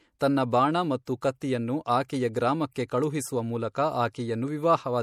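A speech clip showing heavy MP3 compression, likely from a low-bitrate encode around 64 kbps: the treble is cut off at 16.8 kHz, and watery, swirling artefacts are plainly audible. Pre-echo from the transform blocks spreads quantisation noise ahead of sharp attacks at 1.05, 1.21 and 2.08 s, so each onset is preceded by a brief hiss and sounds softened.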